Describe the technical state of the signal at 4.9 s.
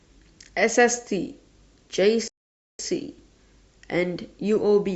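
At 4.9 s the speech signal is intact, with no audible fault at that moment.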